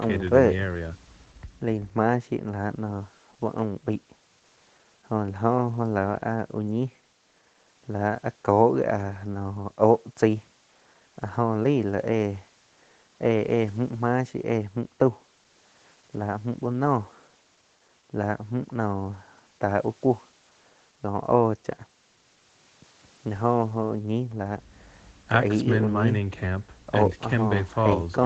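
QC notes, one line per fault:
No faults found: the speech carries the ordinary signature of call microphone processing and a WebRTC call path, with the lowest bass filtered out and nothing above 8 kHz, a band limit that fits an Opus codec at its wideband setting.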